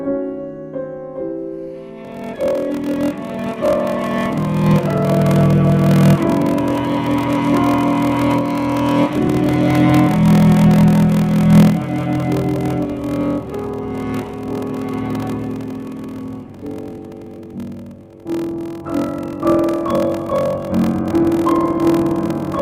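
From 2.03 s to the end of the clip there is a block size mismatch (padded). One stage hands over blocks shorter than the next stage expects, and the shortfall in each block is filled with silence. The gaps repeat at 41.7 Hz, which is heard as a steady low buzz. The audio runs at 0.889 times normal speed while keeping roughly its pitch. This fits 1024-sample blocks being read as 1152-sample blocks.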